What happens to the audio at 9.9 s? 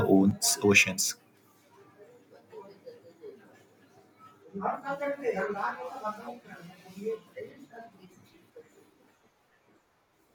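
At 9.9 s the speech sits inside a stretch where one channel drops out, from 0.31 s to the end of the clip. The likely cause is that one side of the stereo feed stopped delivering signal, so the mono sum is carrying only the surviving channel. Content shared by both channels lands about 6 dB quieter than before 0.31 s, and anything present only on the lost side is gone entirely.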